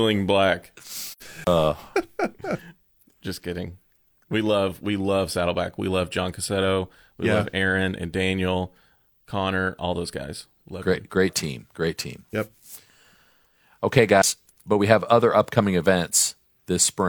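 At 1.09 s, two compressed audio frames fail to reach the decoder, and it fills their spectrum with zeros. This is AAC frame loss with muting. The overlapping transform windows smooth the edges, so the speech fades down into a hole of about 85 ms and fades back up by 1.22 s. Its length fits two lost frames.

Just after, from 1.44 to 1.47 s, comes a CD skip. The disc player loses tracking, its laser lands on a different turn of the spiral, and it mutes for a few tens of milliseconds while relocking. Playback then resumes from a different point on the disc, so the speech is heard as a short break followed by an abrupt jump in continuity. A second, very brief CD skip happens at 14.22 s, just before "but we have other", with the same break-and-jump character.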